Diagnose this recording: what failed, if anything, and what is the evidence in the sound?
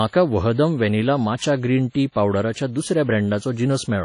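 The codec stage failed. The speech carries a ringing, washy texture with hiss that breathes along with the signal, and nothing remains above 10.1 kHz. That points to a low bitrate around 32 kbps, likely WMA compression. Unlike network damage, nothing drops out; the degradation is continuous.

Pre-echo from the same transform coding puts a short hiss ahead of sharp attacks at 0.53 to 0.58 s, 1.36 to 1.41 s, 2.12 to 2.16 s and 2.53 to 2.56 s, spreading 36 to 55 ms. Noise sized for each loud onset fills the quiet part of its block, so it arrives before the sound, unlike reverb, which trails after.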